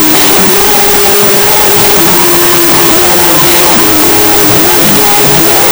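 Throughout, a wrong sample width turns 16-bit data into unsigned 8-bit samples, so the audio plays at half speed and an octave low, buried under loud hiss. On a spectrogram, broadband noise fills every band; the waveform is a dense block.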